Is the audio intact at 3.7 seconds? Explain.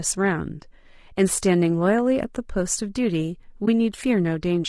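No. From 3.65 to 3.68 s, AAC frame loss with muting leaves a brief dip about 20 ms long. The decoder zeroed one lost frame, and the overlapping windows fade the sound out and back in, so the gap is soft-edged, unlike a hard dropout. Low-delay AAC compression also runs throughout, its grainy, rough texture likely from AAC-ELD at a low bitrate, around 32 kbps.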